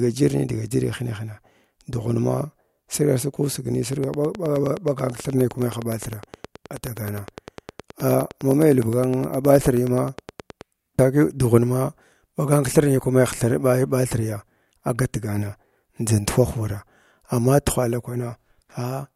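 From 3.93 s to 10.62 s a train of clicks runs under the speech: sharp ticks of nearly identical shape, evenly spaced at about 9.6 per second, roughly seventy in all, and clearly louder than the talker. They continue through the pauses, so they are not tied to the speech itself. Unlike random crackle or isolated dropouts, the steady rate and repeated shape point to a periodic source, likely interference from nearby equipment or a faulty connection or power supply.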